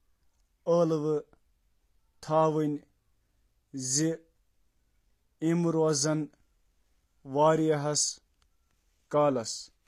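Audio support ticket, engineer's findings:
Likely HE-AAC compression, full clip, consistent with a low-bitrate setting around 24 kbps. Treble rebuilt by spectral band replication rather than coded, so harmonics misalign above the crossover. Plainly audible damage: gritty, lispy sibilants, metallic treble, nothing above 14.9 kHz.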